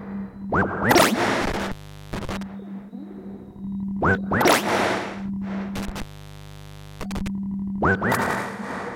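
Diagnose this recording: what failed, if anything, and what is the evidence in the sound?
Intermittent contact in the analogue wiring: the sound breaks up between 1.42 and 2.43 s (open for about 414 ms) and 5.75 to 7.28 s (about 987 ms), with crackle at the edges and hiss while the loose connection is open, unlike the clean silent gaps of a buffer or network dropout.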